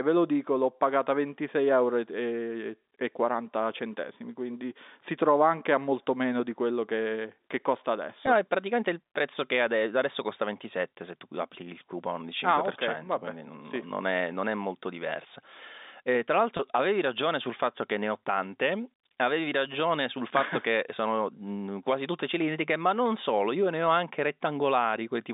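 Packet loss with pitch repetition shows up at 8.26 s and 16.57 s. Gaps of 10 and 20 ms get patched by repeating the last pitch period, so you hear quick buzzy holds.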